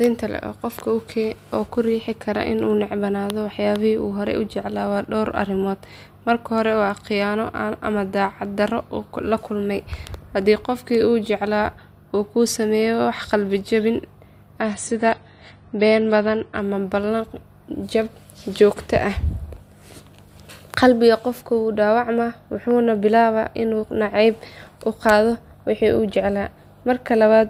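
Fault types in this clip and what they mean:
Adaptive stream at a lower bitrate: from 14.61 to 16.61 s the speech abruptly loses everything above 9.8 kHz and codec artefacts thicken, fitting a drop from about 96 to 32 kbit/s; unlike a dropout there is no gap, and full quality snaps back.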